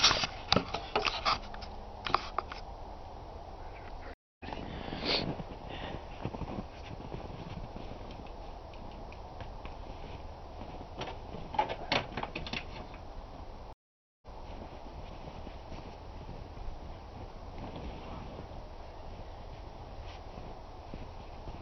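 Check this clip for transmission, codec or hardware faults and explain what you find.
Two stream reconnect faults. At 4.14 to 4.45 s and 13.73 to 14.40 s the connection dropped and the player restarted its decoder mid-stream, leaving gaps of 257 ms and 491 ms. The first resumes roughly a fifth of a second later, skipping material; the second resumes 186 ms earlier, repeating some.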